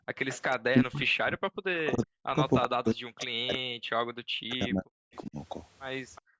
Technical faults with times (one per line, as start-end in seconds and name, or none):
0.00-0.08 background gated by the echo canceller
0.28-0.47 echo leak
0.68-1.40 speech suppressed in double talk
1.94-5.37 speech suppressed in double talk
2.62-3.25 echo leak
6.15-6.22 echo leak
6.22-6.40 background gated by the echo canceller